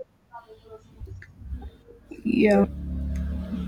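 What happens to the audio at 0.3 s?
Nothing goes wrong at 0.3 s: the speech there comes through intact, with no dropout, click, distortion or other fault.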